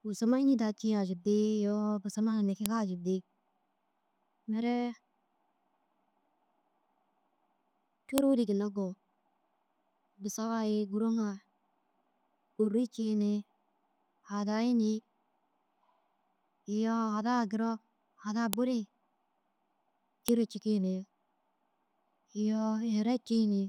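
Sharp clicks at 2.66, 8.18 (before "ri ginna koo"), 18.53 (after "iyoo hadaa duro hadaa") and 20.28 s (before "cikii ni") are file header played as audio: leftover WAV header bytes sound as a snap at each joined piece's start, whatever the speech is doing.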